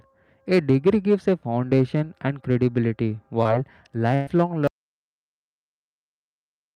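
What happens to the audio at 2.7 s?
Nothing goes wrong at 2.7 s; the speech carries on intact through that moment with no dropout, click or distortion to be heard.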